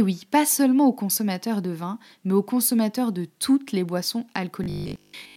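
From 4.64 to 5.36 s, right after "de toutes les boissons", the speech turns into robotic sound from repeated short buffers: a rigid 50 Hz metallic buzz, likely from a roughly 20 ms block being replayed for most of that stretch. The spectrogram shows evenly spaced harmonics, and the waveform shows repeating cycles.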